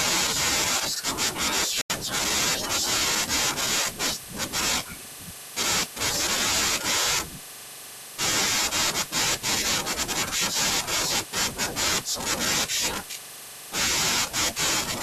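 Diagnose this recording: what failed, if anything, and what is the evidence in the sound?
Digital broadcast dropout at 1.81 to 1.93 s. The speech mutes abruptly for about a tenth of a second, then resumes further into the programme. The fault is at the reception and decoding stage: the signal was lost or frames failed their checks, so the receiver muted and discarded them. The silence fits about two lost frames.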